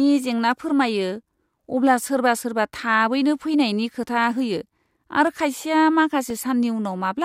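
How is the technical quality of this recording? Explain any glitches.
The recording has one problem: periodic USB or driver dropouts in the back half of the speech. Starting at 4.24 s, just after "सोरबा थाबैनो फैनायनि खोथा", and running to about 6.30 s, there are about three tiny gaps spaced 1.024 s apart. Each gap is roughly a millisecond of audio replaced by silence. Something on the system is stalling the USB bus or the audio driver on a fixed timer, so you hear small regular ticks only while speech is playing.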